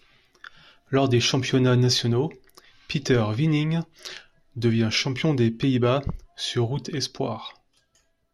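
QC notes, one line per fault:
7.45–7.49 s: corrupt frame decoded. A brief chirp-like blip peaking around -25 dBFS, consistent with two damaged codec frames being played with misread gains and spectral codes.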